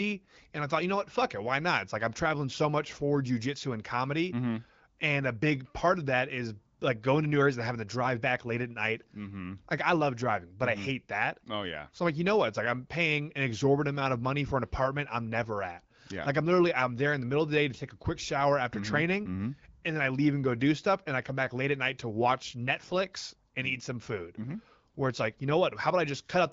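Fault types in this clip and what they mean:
The speech shows no technical faults; it carries the band-limited sound of wideband AMR voice coding, with nothing above about 7.6 kHz and only light coding texture, which fits a mid-range rate of around 15.85 kbit/s.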